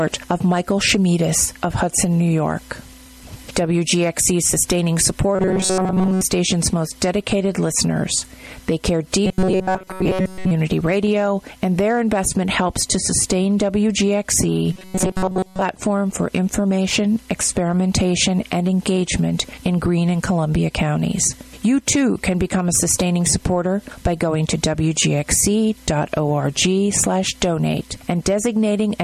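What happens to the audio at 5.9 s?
Robotic sound from repeated short buffers runs from 5.35 to 6.22 s, laying a rigid, metallic buzz near 188 Hz over the sound. The likely cause is audio arriving too seldom, so a slice of about 5 ms is replayed for most of that span.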